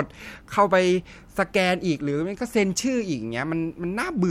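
No technical faults occur in the speech at any point, so there is nothing to describe in time order.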